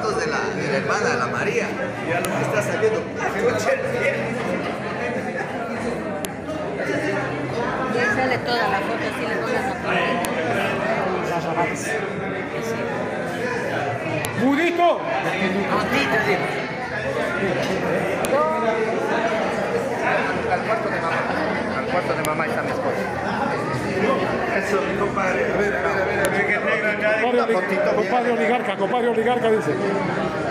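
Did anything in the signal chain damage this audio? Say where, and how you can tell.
Yes, at the storage stage. There is file header played as audio: sharp, loud clicks at 2.25, 6.25, 10.25, 14.25, 18.25, 22.25 and 26.25 s, exactly every 4 s. Four-second WAV pieces were joined with their headers intact. Those header bytes play as a brief burst of samples.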